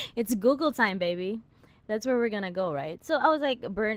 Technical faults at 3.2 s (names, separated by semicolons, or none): Opus voice compression; de-emphasis applied wrongly